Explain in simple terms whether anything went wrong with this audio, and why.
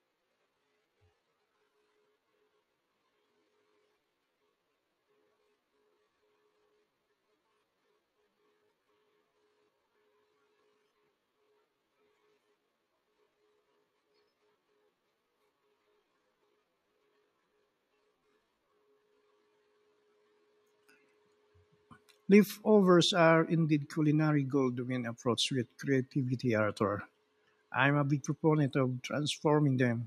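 For the first 21.04 seconds the speech drags at roughly two-thirds of normal pace, about 0.64 times speed, while the pitch stays put. This is a time-stretched section, likely from software lengthening the audio by repeating tiny slices.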